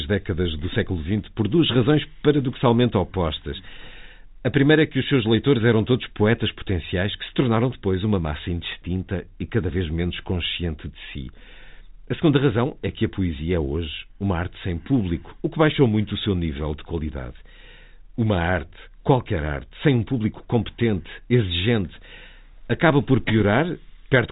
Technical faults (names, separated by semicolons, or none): none